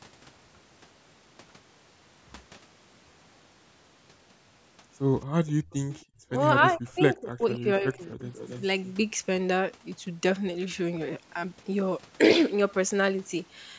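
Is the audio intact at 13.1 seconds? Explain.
Yes, the speech at 13.1 seconds is intact, with only the expected effect of the call microphone processing, which keeps nothing above 8 kHz and trims the lowest bass.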